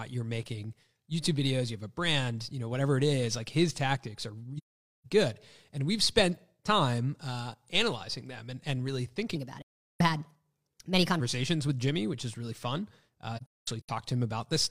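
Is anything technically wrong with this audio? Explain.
Yes, there are two kinds of fault.

AAC frame loss with muting: at 4.57 to 5.06 s, right after "like his tactics are", the speech fades into a soft silence of about 0.47 s and fades back. It happens again at 9.62 to 10.01 s (about 0.38 s) and at 13.36 to 13.89 s after "which is really fun." That last one is a broken patch of short holes spread over about half a second, the longest around 0.2 s. Lost AAC frames were decoded as empty spectrum, and the overlapping transform windows smooth the edges of each gap.

Section at the wrong speed: from 9.35 to 11.20 s, following "them and and really", the speech turns hurried and high. It runs 1.21 times too fast, about three semitones sharp, with pitch and tempo shifting together. The likely cause is that this stretch was played out against the wrong clock.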